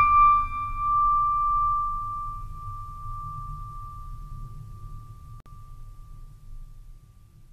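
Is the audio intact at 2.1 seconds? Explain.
Yes, the music plays through 2.1 seconds without any dropout, click or other audible fault at that moment.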